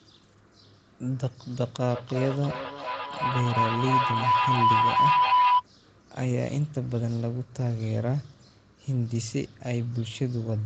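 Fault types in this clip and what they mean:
Feedback howl: a microphone and loudspeaker in the same room form a loop that adds level on each pass, so instead of dying away like an echo, the repeats swell and narrow to one tone. From 1.89 s to 5.65 s, a ringing pitch near 1 kHz builds until it sits about 6 dB above the speech, pulsing roughly every third of a second, which fits the loop's round-trip delay.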